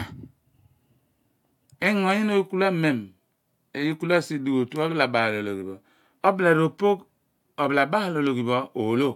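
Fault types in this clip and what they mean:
Repeated frames, 4.91 to 4.95 s: a 42.7 ms run of the compressed speech stream is decoded twice, so that fragment plays once more as a brief stutter. The clip grows 42.7 ms longer, which fits two codec frames.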